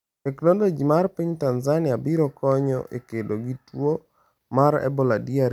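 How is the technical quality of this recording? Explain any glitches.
No glitches or technical faults are audible anywhere in the speech recording.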